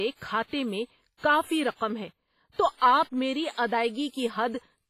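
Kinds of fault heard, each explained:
WMA compression: The speech rings and sounds washy throughout, with hiss that swells and fades with each syllable. This is likely from heavy WMA coding at a low bitrate, perhaps 24 kbps. A spectrogram shows smeared, patchy blocks, missing weak detail, and nothing above 15.4 kHz.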